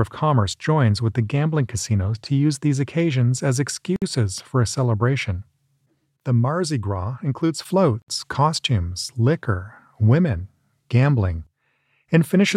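Gaps at joins of encoded pieces break the audio at 3.96 to 4.02 s (58 ms) and 8.02 to 8.08 s (64 ms), four seconds apart. Unlike dropouts, the sound resumes exactly where it stopped.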